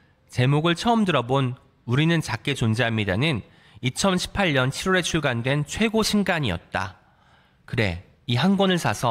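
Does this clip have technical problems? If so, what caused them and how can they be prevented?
No, no technical faults heard.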